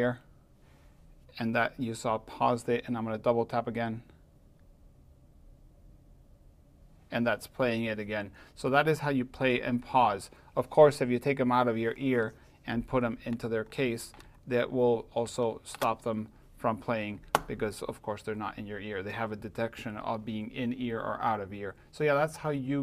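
No technical faults can be heard anywhere in the audio; the signal stays steady and intact throughout.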